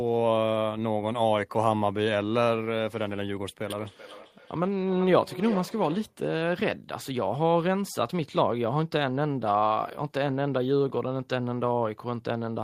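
From 3.67 to 6.24 s the speech returns in thinning, ringing repeats about every 0.4 s, up to about -14 dB: feedback echo between two devices, one's speaker feeding the other's microphone.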